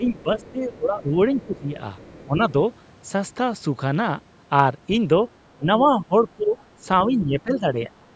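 From 0.0 to 1.08 s, the speech is held down by speech suppressed in double talk. It dips by about 15 dB in pieces. Under it, from 0.06 to 0.51 s, the other side's voice leaking through is faintly audible, about 30 dB below the speech. More leakage follows at 1.41 to 1.59 s and 1.96 to 2.26 s. The likely cause is an echo canceller leaving some loudspeaker sound in the microphone. Suppression returns at 1.46 to 1.79 s, then at 2.26 to 2.4 s, shallower at about 10 dB. From 5.56 to 6.56 s the drop is deepest, about 20 dB. From 7.07 to 8.08 s it is about 15 dB. The speech sinks. This is likely the canceller turning both sides down while they talked at once.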